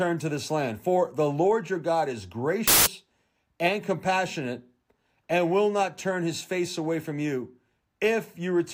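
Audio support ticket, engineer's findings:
Burst of loud, harsh broadband noise, 2.68–2.86 s (about 0.19 s). Samples built from the wrong bytes: decoder/reader misassembling sample bytes (offset, swapped order or misalignment), promoting fast-changing low bits to the most significant part of each value.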